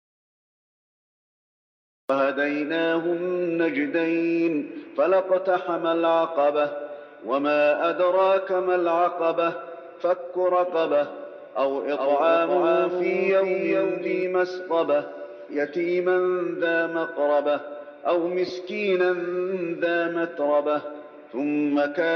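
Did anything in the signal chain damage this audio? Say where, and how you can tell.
Yes. The clip opens in an audio dropout to silence that's already under way and lasts until 2.1 s. It's plain silence, with no room tone, so the input side, likely a lost device or a mute ahead of the recorder, was feeding nothing while writing continued.

From 11.69 to 14.23 s there's a doubled audio track: a full-band copy trailing by around 400 ms, about 5 dB down, with no reverb colour, and it switches in and out abruptly. That points to editing or a slower second capture path, with two unaligned copies summed.

At 18.48 to 18.50 s you get a brief noisy smear. That's lost LE Audio frames: about 15 ms concealed by the LC3 decoder re-using the last spectrum with scrambled phase, which fits a couple of dropped frames on the Bluetooth link.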